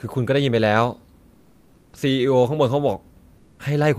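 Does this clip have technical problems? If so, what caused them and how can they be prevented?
Yes. This speech clip has comfort noise in place of the background twice, from 1.33 to 1.93 s and from 3.37 to 3.59 s. In each pause the real background, about 35 dB below the loudest sound, turns into a steady, featureless hiss about 2 dB quieter. The likely cause is discontinuous transmission in a voice codec such as Opus, which stops sending during pauses. Disabling DTX on the sender prevents this.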